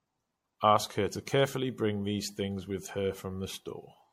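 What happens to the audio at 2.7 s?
At 2.7 s the speech sounds swirly, hollow and smeared, with blurred attacks and nothing above 16.5 kHz, as it does throughout. This is likely generation loss from MP3 encoding repeated about seven times at around 65 kbit/s.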